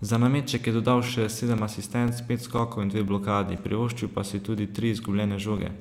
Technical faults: periodic USB or driver dropouts

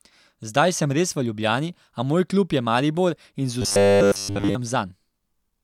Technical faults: robotic sound from repeated short buffers

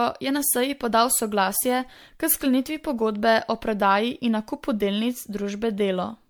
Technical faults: generation loss

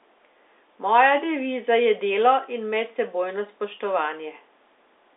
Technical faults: none

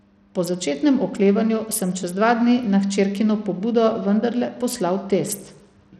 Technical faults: Bluetooth SBC compression

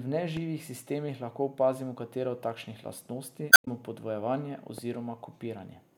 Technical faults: loud pop; damaged data in a compressed stream

